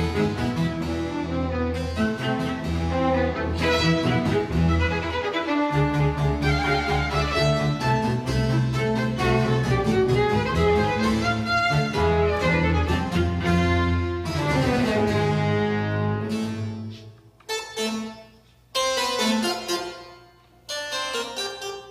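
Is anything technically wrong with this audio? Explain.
No, there is nothing technically wrong with this audio.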